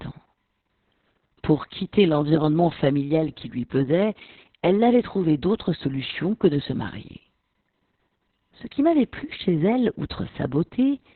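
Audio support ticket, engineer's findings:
Muffled, hoarse, slightly robotic speech throughout; nothing above 4.3 kHz. Opus voice compression in narrowband SILK mode: linear-prediction coder with coarsely quantised excitation, band cut to 4 kHz. Heavy damage fits a bitrate near 6 kb/s, long 60 ms frames.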